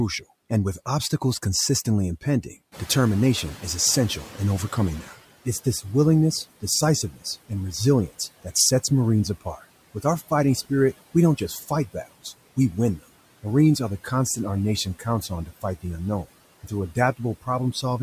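Speech with a noise suppressor that trails behind changes in the room. Around 2.5 s, just after "with obstacles consistently impending", the room noise jumps by about 15 dB. From 2.72 to 5.17 s the noise suppressor is catching up. Its noise estimate lags the new level, so the noise first comes through with less reduction. Over about 2.45 s it sinks as the estimate adapts, ending about 13 dB lower. The room noise itself is part of the recording and sits about 20 dB below the speech after the rise. The suppressor also cuts speech twice. From 7.11 to 7.26 s, just before "and resilience that sets", about 150 ms of sound is pulled down by up to about 14 dB. From 14.85 to 15.06 s, right after "constant our", roughly 100 ms drops by up to about 10 dB. In both places the suppressor took quiet speech energy for noise. Those stretches sound swallowed and faint.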